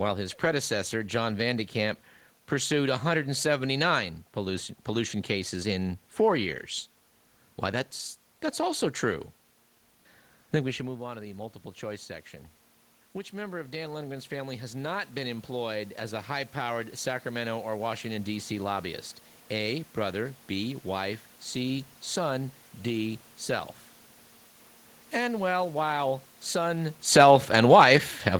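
Automatic gain rising runs from 10.76 to 18.58 s, starting just after "think we". Around ten and a half seconds the talker moves away and the level at the microphone falls by about 13 dB. The automatic gain control reads this as a quiet input and slowly pushes its gain up by about 9 dB over nearly eight seconds, so the voice and the room noise swell together rather than the voice alone recovering.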